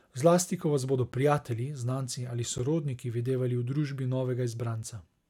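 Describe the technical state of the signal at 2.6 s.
At 2.58 s the speech drops out for about 11 ms in a block of digital silence, which fits a 512-sample buffer that was not filled in time and was output as zeros. The signal cuts out and back with no fade, and at this length it is heard as a single tick. On the waveform it shows as a flat line; on the spectrogram, a thin blank column.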